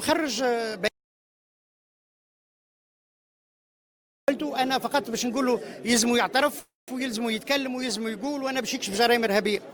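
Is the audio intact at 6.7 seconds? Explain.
No. From 6.59 to 6.90 s there is a call audio freeze: the last sound is stretched into a fading buzz or hiss that drops to silence for about 170 ms before the audio resumes. This is likely packets held up in transit, leaving the jitter buffer empty. Unlike a dropout or packet loss, nothing is cut. The audio continues from where it stopped, now running about 285 ms later, because a gap was inserted rather than content removed.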